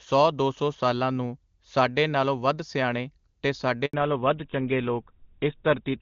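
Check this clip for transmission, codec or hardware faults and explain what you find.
Two faults: a handover gap followed immediately by a fallback to narrowband, with the call dropping out briefly and then losing its top end for the rest of the clip.

Handover gap, 3.85 to 3.93 s, right after "ਨਾਲੋਂ ਵੱਧ ਸਿਆਣੇ ਤੇ": the network switch delivered no speech frames for 80 ms, so the voice cuts to silence and that stretch is lost.

Fallback to narrowband, from 3.93 s to the end: the call left HD Voice for an older codec, likely GSM full rate. Nothing above 4 kHz survives, so the speech turns duller and rougher than the clean wideband sound before, which fits a high-rate AMR-WB link.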